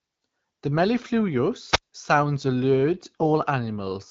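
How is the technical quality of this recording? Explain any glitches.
Two short glitches stand out, over an AMR-WB (HD Voice) phone link that sounds clear, consistent with a mid rate around 12.65 kbit/s, with only light coding texture.

From 1.69 to 1.83 s there's a wireless microphone squelch dropout: the radio signal fades, hiss rises, and the receiver mutes the output for about 43 ms before the speech comes back.

From 3.20 to 3.26 s there are AMR bit errors: a few percent of the less protected bits arrived flipped, enough to hit a handful of frames, so the speech briefly turns scratchy and gargly while keeping its pitch and level.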